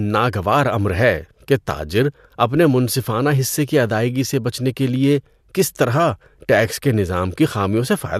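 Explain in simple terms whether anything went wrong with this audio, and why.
Nothing went wrong: the speech recording has no audible technical faults.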